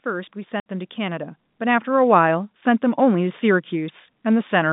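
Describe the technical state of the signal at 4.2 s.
At 4.2 s the speech is intact, carried through the ordinary telephone-band G.711 coding with no fault audible at that point.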